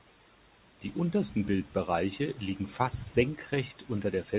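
No technical faults are audible.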